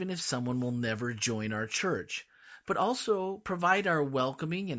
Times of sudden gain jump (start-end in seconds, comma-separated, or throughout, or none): none